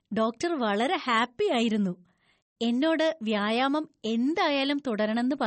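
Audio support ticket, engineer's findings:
MP3 compression, whole clip: watery, swirly speech, smeared consonant onsets, sibilants chirpy. Hard top edge at about 8.3 kHz, consistent with a low bitrate near 32 kbps. Likely encoder starving bits, weak lines toggling per frame. Swirl separates it from plain low-pass filtering.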